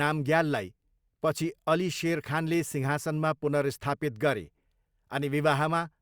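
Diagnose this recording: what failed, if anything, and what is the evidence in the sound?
Nothing failed: the sound carries no evidence of a fault at any stage of this recording.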